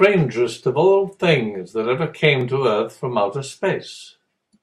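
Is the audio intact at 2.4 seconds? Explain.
No. At 2.41 s there is a block of digital silence: the speech drops to silence for about 0.7 ms, which fits a 32-sample block left unfilled, and jumps straight back. It sounds like one tick, not a fade or audible hole.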